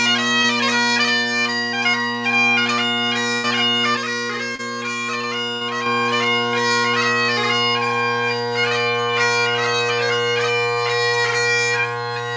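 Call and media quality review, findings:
Short concealed packet loss at 0.42–0.46 s and 4.56–4.61 s. Brief smear in the audio, roughly 20 ms and 30 ms. Jitter buffer/decoder concealment extended the preceding sound across the missing frames, then crossfaded back into received audio.

Burst of packet loss at 3.36–3.46 s and 5.55–5.63 s. Held, decaying tail, then a jump forward with about 80 ms and 60 ms of audio missing. Consecutive frames late or dropped. Concealment continued the last sound while attenuating it before playout resumed.

Sudden gain jump at 3.97 s. Level and noise floor drop together by about 5 dB, restored abruptly at 5.86 s. Likely a digital gain step applied without a ramp somewhere in the capture or processing chain.

Audio band ends at 8 kHz throughout, which fits wideband G.722 at 64 kbps on the call path.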